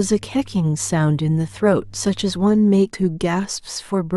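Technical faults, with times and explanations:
2.93 s, compressed frames skipped. About a tenth of a second of speech is lost. Whole frames went unplayed, so the speech jumps ahead.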